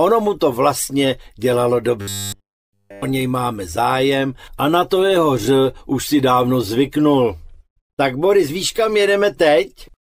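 From about 2.01 s to 3.02 s the sound goes robotic from repeated short buffers: for that whole second it turns into a rigid, metallic buzz pitched at 100 Hz. That pitch points to one tiny 10 ms chunk being looped, likely because fresh audio wasn't arriving fast enough and the playback side kept replaying the last buffer. Essentially all of that stretch is repeats, so the real material underneath is skipped and only its rough shape survives.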